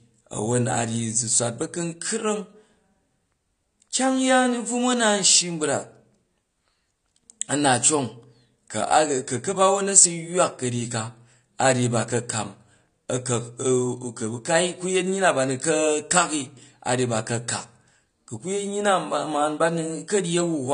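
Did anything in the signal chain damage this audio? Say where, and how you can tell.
Yes, at the codec stage: the speech was likely squeezed through AAC compression at a low bitrate, around 32 kbps. Throughout, nothing sounds above 9.8 kHz, so it is dull, and the coarsely quantised spectrum leaves sibilants fizzy and sustained sounds warbling and smeared.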